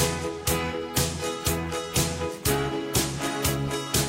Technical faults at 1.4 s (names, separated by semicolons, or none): none